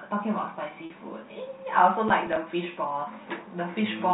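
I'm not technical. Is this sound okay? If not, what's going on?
No, there are two short problems in this speech recording.

At about 0.86 s, packet loss with pitch repetition causes a brief hiccup, about 40 ms long, which fits two lost packets. A few pieces of the signal went missing in transit, and the receiver filled the hole by repeating the last tiny cycle of the voice. You hear a slightly held, buzzy sound for an instant. It is one smooth repeat, not a rough, scratchy patch.

From about 2.08 s to 2.36 s, there is processor overload crackle. The computer was too busy to deliver each very small chunk of audio on time, with chunks of roughly 5 ms. Several deadlines were missed in a row, and each miss left a tiny silent gap with sharp edges. Together these sound like a gritty tearing over the speech. This is many quick, harsh dropouts, where the first fault was a single smooth held tone.

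The narrow, telephone-like sound, with nothing above 4 kHz, comes from ordinary G.711 telephone coding and is not one of the faults.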